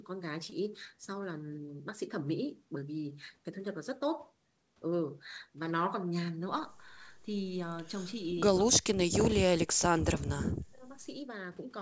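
A speech recording with two kinds of fault. At 0.50 to 0.53 s there is a short concealed packet loss: about 20 ms of audio failed to arrive and the decoder covered roughly 15 ms of it by extending the preceding sound before crossfading back. It is heard as a tiny smear or wobble, not a hard dropout, which separates it from an uncovered gap or a digital click. Later the voice sinks sharply, by around 40 dB at its deepest, in two stretches, from 8.65 to 9.16 s (about a third of a second affected) and from 9.47 to 10.84 s (about a second in total). This is likely speech suppressed in double talk, with an echo canceller ducking the talker while the far side also spoke. The suppression over these longer spans sets it apart from packet loss, which is momentary, and from a fade, which is smooth. The whole clip is band-limited to 8 kHz, in keeping with a G.722 call path.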